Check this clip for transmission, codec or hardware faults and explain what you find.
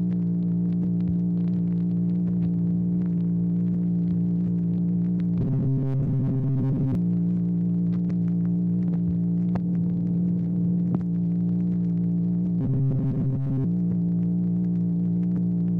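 Two stretches of robotic sound from repeated short buffers occur, from 5.40 to 6.95 s and from 12.61 to 13.65 s. New audio is likely arriving too seldom, so the software keeps replaying a fragment of about 7.5 ms while most of the real signal is skipped. That fixed repetition imposes a rigid 134 Hz buzz on both passages, turning the sound metallic and mechanical while its overall shape still loosely follows the original.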